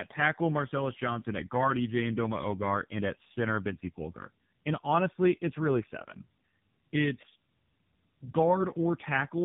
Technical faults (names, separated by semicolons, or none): tandem speech coding